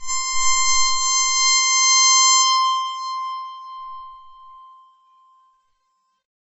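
Music with transcoding between lossy codecs throughout: nothing above 8 kHz, and layered smearing that fits a low-rate MP3 likely re-encoded to AAC-LC.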